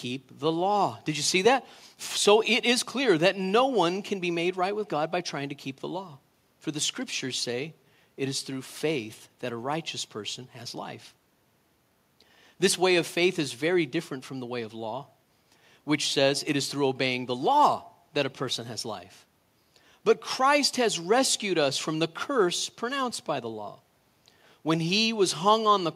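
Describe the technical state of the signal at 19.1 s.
At 19.1 s the speech signal is intact, with only the room's own background noise sitting about 45 dB below it.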